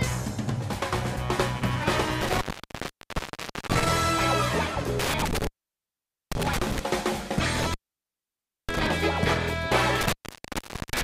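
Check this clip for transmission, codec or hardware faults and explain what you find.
The clip has a hardware fault, an intermittent contact, at 2.21–3.90 s, 4.99–6.79 s, 7.56–8.87 s and 10.01–11.03 s. A loose connection breaks the signal path for 1.29 s, 0.85 s, 0.95 s and 0.81 s respectively, so the audio drops out with crackle at each edge and faint hiss remains while the contact is open.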